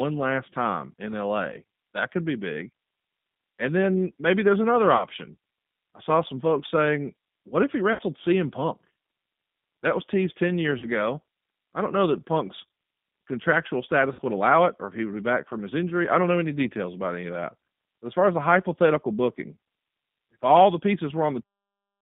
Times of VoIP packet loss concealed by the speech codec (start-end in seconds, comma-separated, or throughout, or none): 4.97-5.05, 7.93-8.02, 10.78-10.89, 14.13-14.21